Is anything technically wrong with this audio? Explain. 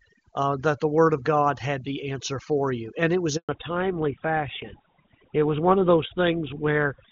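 Yes. There are three faults in this speech clip.

Overdone noise removal runs through the whole clip. The suppressor cuts any frequency band that comes close to its noise estimate, so the background drops and breaks up into twinkling specks. A noisy recording would keep a steady hiss instead of these isolated flickers.

A handover gap follows "you and it was", from 3.37 to 3.49 s. During the network switch no speech frames arrived, so the voice fades within a few tens of milliseconds and stays silent for 120 ms. A pause by the talker would not cut off the sound this abruptly in mid-phrase.

The fallback to narrowband starts at 3.49 s and lasts to the end. The call moves from HD Voice to GSM full rate at 13 kbit/s, so nothing is left above 4 kHz and the voice turns duller and rougher. A simple low-pass filter would remove the top without adding this coding roughness.

Before the switch, the wideband path carries the voice cleanly, which fits a high AMR-WB rate such as 23.85 kbit/s.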